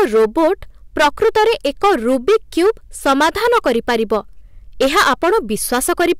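A harsh, gritty fuzz rides on every loud syllable from start to finish. This is hard clipping: the speech was driven about 15 dB beyond what a stage could pass, so around a tenth of the samples have their peaks sheared flat, spraying high harmonics across the spectrum.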